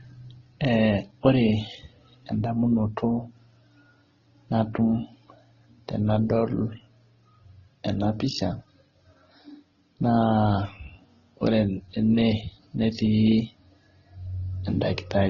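Throughout the speech, transcoding between lossy codecs has likely occurred, from an MP3-like stage through Vorbis into Opus, each encoder re-coding the last one's damage. Nothing remains above 13.8 kHz, and smeared, swirly artefacts pile up, fitting very low bitrates.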